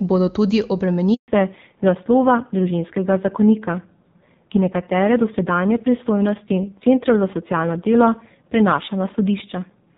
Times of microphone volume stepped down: none

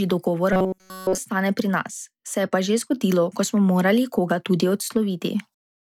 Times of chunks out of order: none

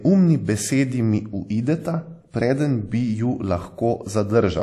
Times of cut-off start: none

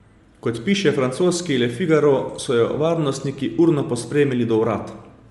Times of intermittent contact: none

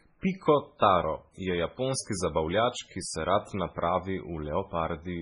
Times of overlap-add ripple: none

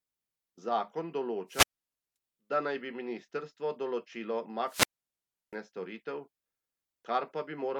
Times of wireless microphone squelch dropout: 1.48-2.16, 4.66-5.55

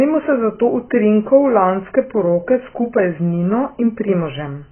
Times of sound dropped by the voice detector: none

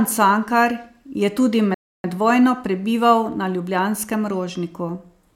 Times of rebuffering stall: 1.74-2.04

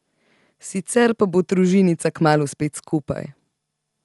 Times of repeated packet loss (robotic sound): none

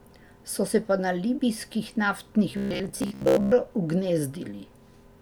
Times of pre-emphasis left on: none

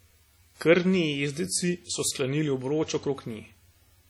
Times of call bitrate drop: none

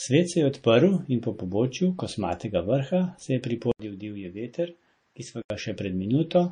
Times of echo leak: none

